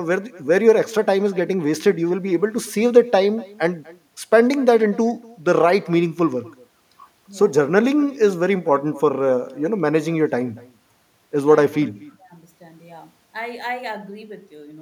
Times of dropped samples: none

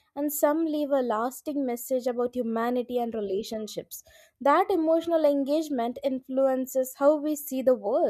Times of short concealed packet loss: none

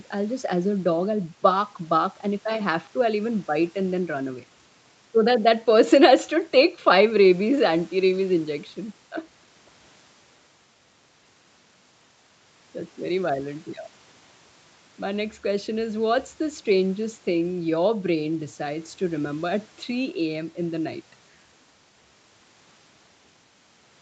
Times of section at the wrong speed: none

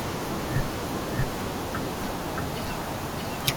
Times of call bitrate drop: none

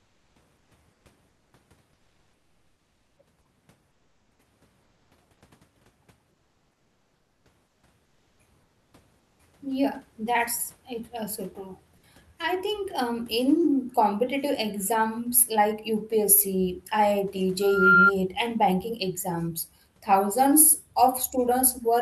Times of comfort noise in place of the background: 0.00-1.53, 3.91-4.39, 4.83-5.41, 6.31-8.93, 9.19-9.39

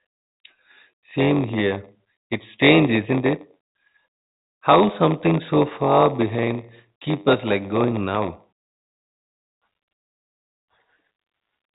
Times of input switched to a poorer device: none

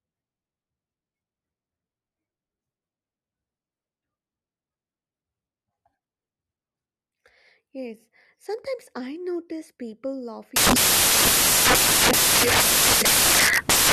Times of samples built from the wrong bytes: 10.56-13.93

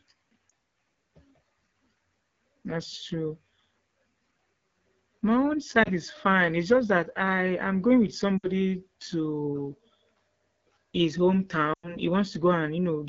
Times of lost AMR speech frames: 0.49, 5.83-5.89, 8.38-8.48, 11.73-11.96

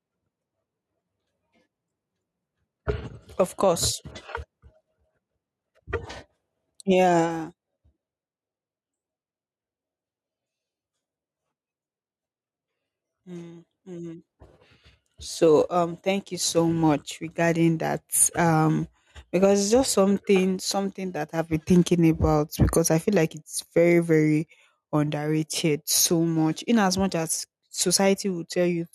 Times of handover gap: none

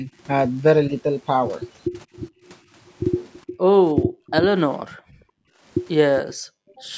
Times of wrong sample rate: none

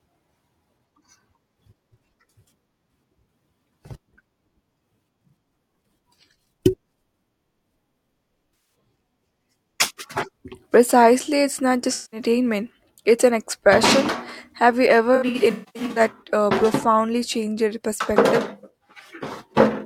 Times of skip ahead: none

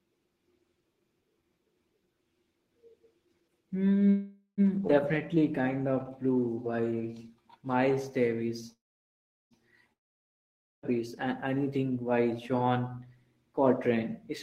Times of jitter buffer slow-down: 5.35-7.96

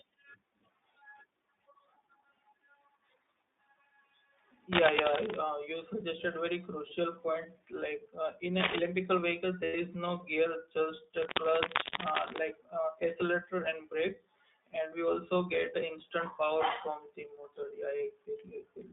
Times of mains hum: none

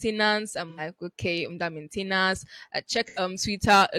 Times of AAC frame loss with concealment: 0.69-0.80, 3.07-3.19

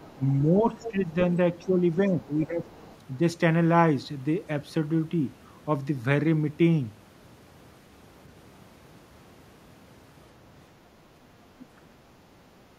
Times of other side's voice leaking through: 0.00-0.19, 0.81-1.14, 1.62-2.95, 11.60-11.65

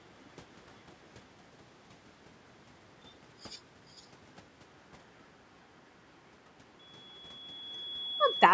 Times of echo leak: 3.89-4.07

